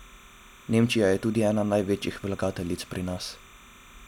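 From start to finish the speech has timecode bleed underneath it: a thin, steady chirping warble sitting roughly 25 dB below the voice. What's happened is that linear timecode from a neighbouring track or cable has leaked into the audio path. That code is a square wave flipping between pitches around 1 and 2 kHz, so you hear it as a busy, twittering buzz. Its repeating pattern fits 29.97 frame-per-second code.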